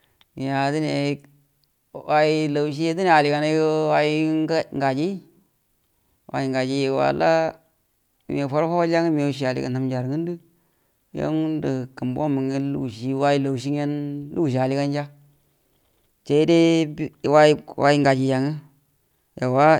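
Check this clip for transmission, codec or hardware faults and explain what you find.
Nothing in the speech recording points to a transmission, codec or hardware problem, and the signal stays steady and intact at every point.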